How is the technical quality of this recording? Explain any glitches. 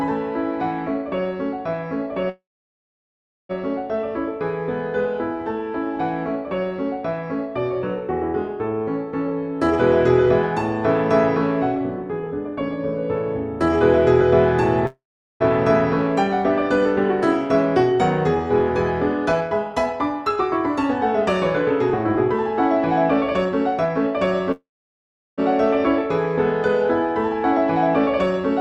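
The recording has repeated network-related glitches: three call audio freezes and three jitter buffer speed-ups.

Call audio freezes at 2.29–3.51 s, 14.87–15.42 s and 24.52–25.40 s are short fading buzzes or hisses that fall mostly silent, likely from delayed packets emptying the jitter buffer. Playback then resumes where it stopped, with nothing lost.

Jitter buffer speed-ups at 9.27–14.21 s (106%), 17.83–24.27 s (105%) and 27.44–28.41 s (104%) trim pitch-period slices to shed the accumulated delay. The first two run slightly hurried at unchanged pitch; the last, at 104%, is just faster at unchanged pitch.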